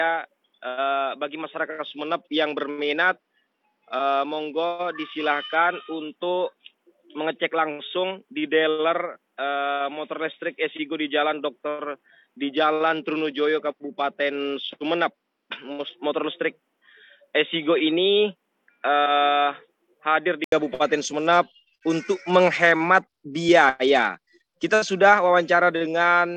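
From the start until 20.52 s the sound is dull and boxy, with nothing above 3.8 kHz, a slightly lower level and a bit more background noise. That's likely the input switched to a poorer device. It clears up after a short 80 ms gap.

At 1.74 to 5.55 s, 12.56 to 15.94 s and 21.03 to 24.98 s the treble thins and gritty noise creeps in. That's a Bluetooth SBC bit pool drop, which fits the bit pool falling from 31 to 12, roughly 88 kbps, and starving the top sub-bands.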